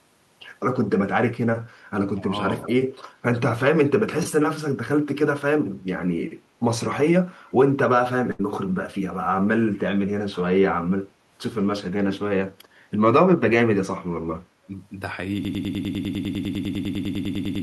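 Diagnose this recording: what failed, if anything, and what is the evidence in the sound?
The speech dips by about 15 dB between 2.15 and 2.38 s, losing about a fifth of a second of level while the far side talks. This is likely speech suppressed in double talk. The call-processing echo canceller could not separate the near talker from loudspeaker echo and attenuated both.

From 2.62 to 2.71 s a faint copy of the voice trails the original by 179 ms, about 20 dB below the speech. This is likely an echo leak in call processing. The far end's echo canceller left residual loudspeaker pickup, which was sent back.

At 8.31 s the last sound is held and fades out for 75 ms, then resumes at 8.41 s with 80 ms missing. This is a burst of packet loss on the network. The Opus receiver concealed the gap by extending and fading the last frame.

From 15.45 s to the end, a 100 ms fragment repeats identically 22 times back to back, and the rest of the speech never arrives. 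This broken-record loop points to a stalled player or stream that kept resending its last held buffer.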